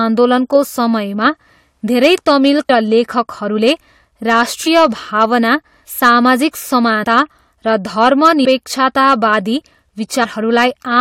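Across the whole speech clip, louder syllables carry a crackly, gritty edge: hard clipping. The signal was driven about 6 dB past what a stage could pass, so a small fraction of peaks are sliced flat, adding harsh high harmonics.

Brief smeared blips mark jumps forward at 2.68 s, 7.02 to 7.05 s, 8.44 s and 10.23 to 10.25 s. These are compressed frames skipped. Whole frames, which fit a 23.2 ms frame length, went unplayed, dropping roughly 400, 100, 200 and 150 ms of audio respectively.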